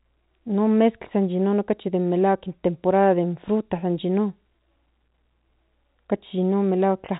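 No faults detected; the speech carries ordinary G.711 telephone coding, band-limited to nothing above 3.8 kHz, with only the faint level-following quantisation noise that format always adds.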